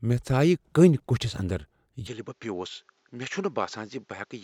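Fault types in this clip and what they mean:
Input switched to a poorer device: from 2.07 s the speech drops about 10 dB and loses everything above 7.6 kHz, likely a change of microphone, unlike a gradual filter drift.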